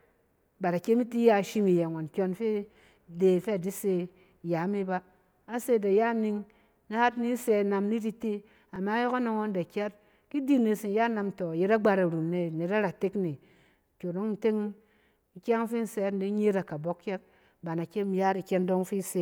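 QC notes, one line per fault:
2.74–2.76 s, 8.76–8.78 s and 14.78 s, overlapping chunks: the speech was handled in blocks about 6 s long, and each new block starts 20 ms before the previous one finished, so that sliver of audio plays twice at every join. You hear it as a small click or a tiny stutter, and because the blocks are all the same length, the hiccups land on a steady six-second grid.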